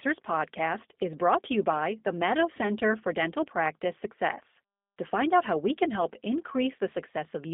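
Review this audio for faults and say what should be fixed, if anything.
The whole recording has G.729 codec damage: the speech is band-limited to roughly 200 Hz to 3.6 kHz and sounds clearly rough and synthetic. The codec rebuilds the speech from a vocal-tract filter plus a few pulses per frame, which fits an 8 kbit/s G.729-style link. To prevent it, record or route the call over a wideband codec like Opus instead of narrowband G.729.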